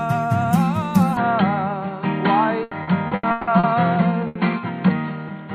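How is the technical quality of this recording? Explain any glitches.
The recording has three clear problems: a loss of clarity partway through, then a choppy, robotic stretch, and finally one short dropout.

At 1.17 s the sound turns dull and boxy and stays that way to the end, with nothing above about 4.4 kHz and a new background hiss roughly 30 dB below the signal. There is no silence at the change and the level holds steady. This is likely an input switched to a poorer device, such as another microphone or a headset's call profile, whose narrower band and own noise replace the original pickup.

From 2.63 to 3.66 s the audio becomes choppy. This is repeated packet loss, which produces robotic sound. Six gaps, the longest 160 ms, were patched by stretching the preceding sound, so about 440 ms, or 43% of that span, is synthetic filler with real audio missing.

From 4.27 to 4.38 s there is a burst of packet loss. 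For about 80 ms the receiver extends the last sound and fades it, giving a brief held buzz or fading hiss. The audio then jumps ahead, and the 80 ms in between is lost.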